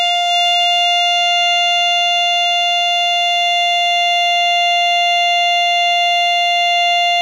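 The clip is a short piece of music, and nothing technically wrong can be heard in it. There are no faults to place in time and no causes to give.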